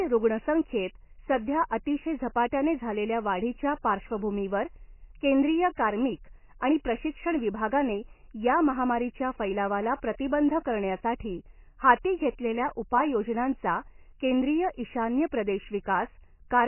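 Heavy MP3 compression is the likely cause of the damage running through the whole speech clip. Starved of bits, the encoder has cut everything above 3 kHz and dropped the weaker frequency lines, which pop in and out from frame to frame; the degree of damage points to a very low bitrate, around 16 kbps. The voice sounds dull and muffled, with a watery, swirling texture, metallic chirps on s sounds, and smeared consonant attacks.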